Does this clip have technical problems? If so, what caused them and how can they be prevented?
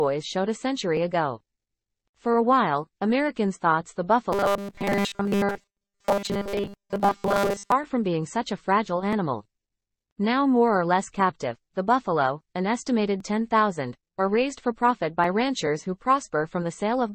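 Yes. Robotic sound from repeated short buffers runs from 4.32 to 7.72 s, where the sound becomes a rigid 200 Hz buzz. This is likely from audio arriving too seldom, with playback looping a segment of about 5 ms and skipping most of the real signal. A larger playback buffer and a steadier delivery path would prevent it.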